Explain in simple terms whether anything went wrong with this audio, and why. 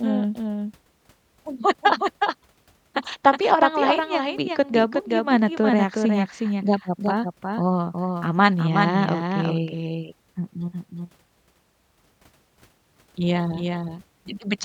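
Something likely captured or mixed the audio twice, with one copy running late. The result is a doubled audio track: throughout the speech, every sound is followed by a noticeably quieter, clean repeat about four tenths of a second behind.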